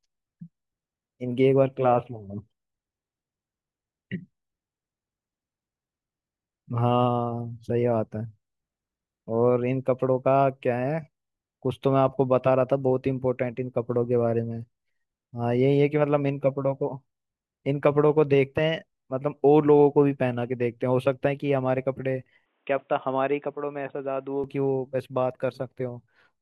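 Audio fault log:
22.46–24.44 s, input switched to a poorer device: the speech abruptly turns dull and boxy, with nothing above 3.8 kHz, drops a few dB, and picks up a faint new noise floor with no gap at the change. That's likely the recording jumping to a narrower-band microphone.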